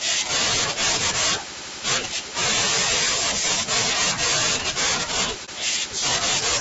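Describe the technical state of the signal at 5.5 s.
At 5.45 to 5.49 s there is AAC frame loss with muting. A short, soft-edged gap opens in the speech. The decoder zeroed the missing spectrum, and the overlapping windows faded the sound out and back in. The dropout lasts about 30 ms, which fits a single lost frame.

Around that gap, the speech sounds rough and grainy. Noise fills the spaces between harmonics, and the top band sounds thin and synthetic. This plainly audible damage is likely from low-delay AAC compression, AAC-ELD at about 32 kbps, whose low bitrate roughens voices.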